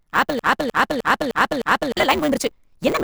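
Block size mismatch (truncated) runs from the first moment to the last. One stage hands over longer blocks than the next stage takes in, and the tail of every block is discarded. The sound points to blocks of 512 samples being cut short. Each cut lands at the same point in the cycle, so a steady 150 Hz buzz sits under the speech. Because part of every block is dropped, the speech runs 1.6 times fast while keeping roughly its natural pitch.

A broken-record loop starts at 0.39 s and continues to 1.97 s. A fragment of about 306 ms repeats exactly, back to back, five times, so the same slice of speech cycles with no change. The likely cause is a stall in the player, encoder or stream that kept resending the last piece it held. The speech that belonged in those 1.6 seconds never arrives, and the audio resumes past the gap.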